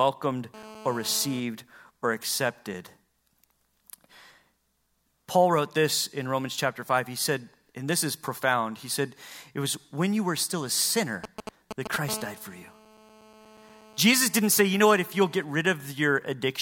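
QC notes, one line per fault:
0.54 to 1.40 s, GSM phone buzz: a hard, raspy buzz at about 217 Hz with a dense stack of harmonics, sitting about 18 dB below the speech. A nearby 2G phone in a call transmits 217 radio bursts a second, and the audio circuitry rectifies each pulse into a click train. Unlike mains hum, it is harsh rather than smooth and has no link to 50 or 60 Hz.
11.24 to 11.96 s, GSM signalling bursts: just after "you were still a", a galloping dit-dit-dit pattern of short 217 Hz buzzes, nearly as loud as the speech itself. The phone is sending only brief groups of radio bursts, as it does when a call or text is arriving, and the rectified pulses come through as broken clusters rather than a continuous tone. That stop-start rhythm is what separates it from the steady in-call buzz on either side.
12.09 to 15.45 s, GSM phone buzz: the continuous 217 Hz rasp returns, about 21 dB below the speech, unbroken for over three seconds as the phone holds a call and transmits its full burst train again. 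It is steady and unrelated to the speech, which marks it as picked-up radio interference rather than distortion of the signal.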